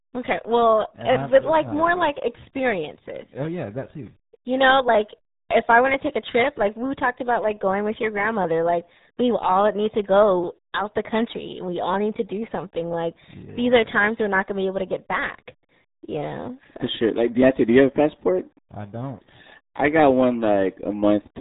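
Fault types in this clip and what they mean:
RealAudio 14.4 codec: The whole clip carries the sound of RealAudio 1, a speech coder built for dial-up modems. The damage is heavy, and the bitrate it implies is around 8 kbit/s. Nothing survives above about 3.8 kHz, so the speech is muffled and has a gargling, watery texture. A plain low-pass filter would dull the top end but leave the remaining band clean. Here the remaining band itself is smeared by the coding.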